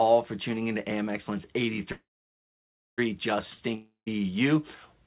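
At 1.92 s there's a call audio freeze: the last sound smears into a fading buzz, then about 0.95 s of near-silence, and things resume at 3.00 s with nothing lost. Likely packets stalled and the jitter buffer ran dry. At 3.74 s comes a long network dropout: a short fading tail, about 0.14 s of quiet, then the audio returns at 4.08 s with roughly a third of a second gone, likely lost in transit. Through all of it the call codec keeps everything below 4 kHz.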